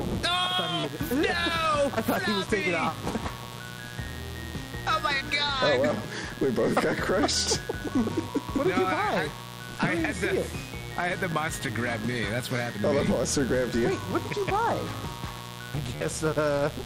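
A steady, raspy buzz runs under the whole recording, sitting roughly 15 dB below the sound itself. This is mains buzz at 60 Hz: switching spikes from a dimmer, rectifier or poorly shielded lead, occurring twice per cycle, leak into the signal and spread harmonics up into the kilohertz range. On top of that, brief repeats break the flow at 0.80 to 0.84 s, at 11.32 s, and at 15.95 to 16.01 s, after which the sound picks up further along. That is Bluetooth stutter: the receiver replayed its last chunk while audio packets went missing, covering gaps of 40 ms, 13.3 ms and 53.3 ms, which fits losing packets of about 13 ms each.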